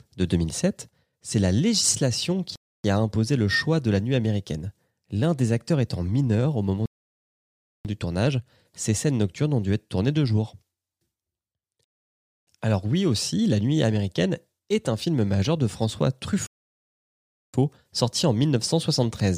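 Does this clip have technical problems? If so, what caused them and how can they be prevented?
Yes. This speech clip has four rebuffering stalls. The sound drops to silence after "c'est la législation" at 2.56 s to 2.84 s. It stops again after "étant mineur au moment" at 6.86 s to 7.85 s, at 11.84 s to 12.47 s, and before "sorti en" at 16.47 s to 17.54 s. Each time, the player ran out of downloaded audio and waited for more. Playback then resumes exactly where it stopped. Nothing is lost, but the pauses add about 0.3, 1.0, 0.6 and 1.1 s. A larger playback buffer or a lower bitrate that matches the connection would prevent these stalls.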